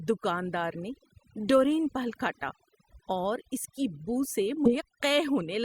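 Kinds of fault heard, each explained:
overdone noise removal: Noise reduction set far too hard runs through the whole speech clip. Frequency bands near the noise level are pulled down or shut off. The background drops and breaks up into twinkling specks.
compressed frames skipped: At about 4.65 to 4.72 s the audio jumps ahead. The frames here are 20 ms long. Roughly 150 ms of sound is lost, about seven frames.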